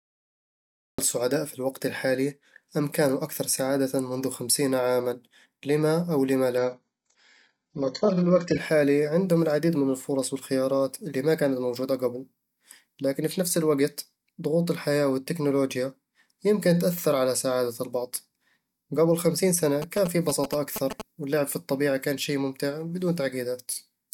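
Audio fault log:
0.0–0.99 s, cut-off start: the speech begins abruptly mid-sound before "سعداء في الوقت الحالي", with no attack. The waveform jumps from flat silence straight into the speech.
6.58–8.58 s, adaptive stream at a lower bitrate: between "عامًا لِمَ أو لِمَ" and "عندهم العديد من الفرص", the treble vanishes and the sound turns smeared and synthetic, pointing to a sharply reduced bitrate. The spectrogram shows a hard ceiling at 8 kHz.
19.82–21.02 s, GSM signalling bursts: after "قبل خمسين سنة", rectified phone radio bursts add a galloping dit-dit-dit of short 217 Hz buzzes, nearly as loud as the speech, before "واللعب في الطبيعة كان". The spectrogram shows vertical striations and evenly spaced 217 Hz harmonics.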